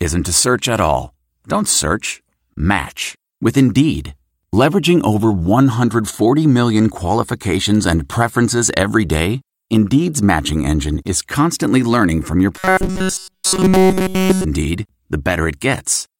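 Right after "constantly learning from your", from 12.58 to 14.45 s, there's robotic sound from repeated short buffers, a rigid metallic buzz at 188 Hz, likely from one roughly 5.3 ms chunk being replayed throughout.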